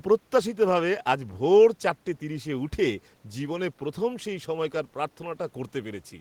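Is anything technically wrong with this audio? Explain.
No, nothing here points to a technical problem; the only extra sound is a bit of ordinary room noise sitting about 38 dB below the speech, which comes from the space the microphone was in rather than from the system.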